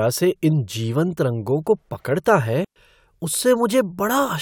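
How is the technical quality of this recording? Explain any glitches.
The recording has one clear glitch, a digital wireless dropout from 2.65 to 2.76 s. The wireless link lost too much data, so the receiver muted the speech for about 114 ms with a very quick fade, leaving a clean gap of near silence with no noise burst on either side.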